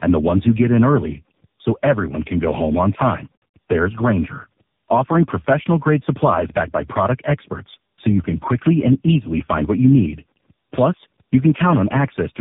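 Throughout, tandem speech coding: three speech codecs in a row each re-code the previous one's errors, leaving rough, warbly, muffled speech with nothing above 3.7 kHz.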